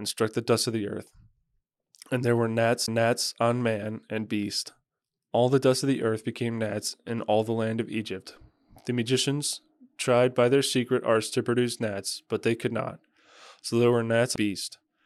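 At 2.86 s and again at 14.36 s the speech suffers a CD skip: the pickup laser lost its track and landed on a different turn of the disc's spiral. Each event is a tiny tick over a very brief mute of around 15 ms, after which the speech resumes from another point, so the flow jumps abruptly. On a waveform each appears as a short flat gap with a discontinuity at its edge; a spectrogram shows a thin vertical broadband line.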